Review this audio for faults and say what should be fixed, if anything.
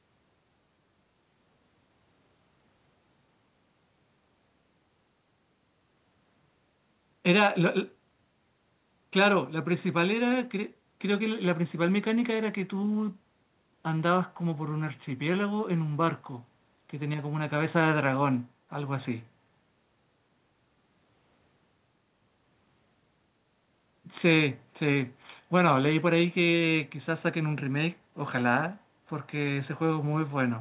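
Nothing here needs fixing; the speech comes over a call path that fits G.711 mu-law at 64 kbps, so nothing reaches above 4 kHz, and that's just how that codec sounds.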